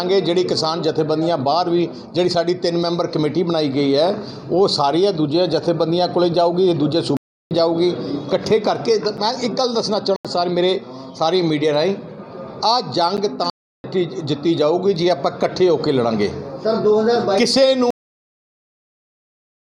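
At 7.17 s a block of digital silence about 341 ms long, to 7.51 s, cuts the sound at hard edges. The length fits a 16384-sample buffer at 48 kHz that was never filled. On a waveform it shows as a flat line, and on a spectrogram as a blank vertical band.

At 9.17 s a gap between stream segments adds about 7 ms of silence, heard as a tiny hard-edged dropout. A second block of digital silence runs from 10.16 to 10.25 s, about 85 ms, which fits a 4096-sample block, and sounds like a short hole.

At 13.17 s a second stream-segment gap adds about 10 ms. It comes exactly 4 s after the first, which matches the segment boundaries. On a spectrogram each gap is a hairline empty column. No audio is lost at either gap.

From 13.50 to 13.84 s another 341 ms block of digital silence repeats the pattern of the first.

At 17.91 s there is a cut-off end. The final buffers were never played, so the sound stops mid-event without any decay. 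The waveform drops abruptly to flat silence, and the spectrogram is empty through to the end.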